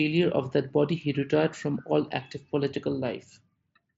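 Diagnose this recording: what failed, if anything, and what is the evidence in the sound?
Nothing in this speech recording points to a failure at any stage. What comes through is the Bluetooth mSBC headset codec doing its normal job: the sound stops at about 7.7 kHz, with the light graininess that wideband headset coding leaves behind.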